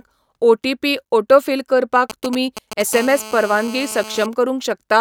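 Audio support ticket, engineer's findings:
Galloping dit-dit-dit of short raspy 217 Hz buzzes, 2.10–2.82 s, fairly strong against the speech. GSM signalling bursts from a nearby 2G phone, radio pulses rectified in the audio input stage.

Steady hard, raspy 217 Hz buzz, rich in harmonics, 2.93–4.26 s, about 16 dB below the speech. GSM phone buzz from a nearby handset in a call, its 217 Hz transmit bursts rectified by the audio circuitry.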